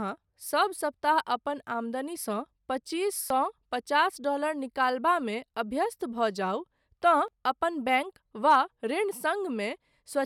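Audio missing between chunks at 3.30 s, between "आमदनीसँ पच्चीस" and "पचास डॉलर निकालबामे", and again at 7.28 s: the speech skips abruptly, roughly 20 ms lost each time, likely where a recorder working in 4-second chunks dropped audio while switching chunks and butted the sides together.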